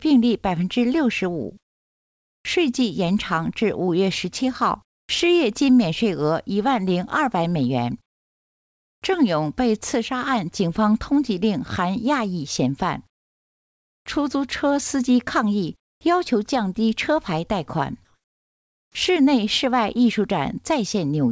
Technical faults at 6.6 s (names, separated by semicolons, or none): none